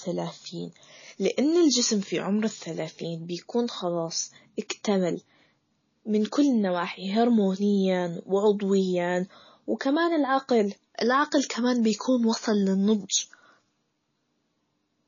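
From start to finish the speech carries plainly audible MP3 compression damage. Nothing reaches above 7 kHz, so sibilants lose their edge and the top end sounds dull. Weak spectral components drop in and out from frame to frame, giving a watery, swirling texture around the voice, with chirpy metallic traces on s sounds and softened consonant attacks. The likely cause is a low-bitrate MP3 encode, consistent with roughly 24 kbps.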